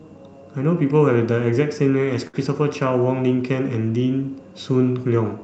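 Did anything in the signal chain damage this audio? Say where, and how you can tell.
Yes. A short stall from a late packet, at the network and jitter-buffer stage, appears at 2.27 to 2.36 s: the sound is held for about 63 ms, then resumes exactly where it left off. The buffer ran dry and stretched the last audio while waiting. Unlike a dropout, nothing is skipped; everything afterwards simply arrives about 63 ms later.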